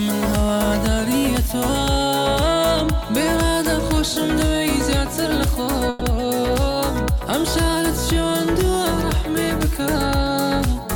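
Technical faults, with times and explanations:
5.89 to 6.03 s, call audio freeze: the last sound stretches into a fading buzz for about 120 ms, then the audio resumes where it stopped, with nothing lost but everything after arriving 120 ms later, likely because delayed packets left the jitter buffer empty.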